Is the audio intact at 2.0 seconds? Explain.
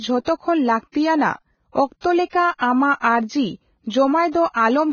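No, not quite. Right around 2.01 to 2.04 s there's pre-echo: a short hiss creeps in for about 34 ms just before a sharp onset, and the attack itself comes out soft and smeared instead of crisp. It happens because the codec spreads its quantisation noise across the whole transform block, so noise sized for the loud attack also spills into the quiet stretch leading up to it.

That's sitting on top of damage you hear everywhere, including at this moment. The speech is hissy and grainy, the tonal parts sound roughened, and there's nothing above 6.6 kHz, so the top end is gone. That's most likely heavy Vorbis compression at a very low bitrate, something around 16 kbps. The treble gets quantised so coarsely that fine detail turns into noise of roughly the same energy, and the cut-off gets pulled down.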